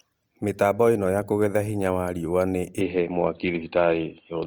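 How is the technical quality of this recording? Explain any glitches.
The recording has one clear fault. From 2.81 s to the end, the speech turns dull and boxy, with nothing above 4.5 kHz. A small level shift and faint new hiss arrive with no gap. This is likely an input switched to a poorer device.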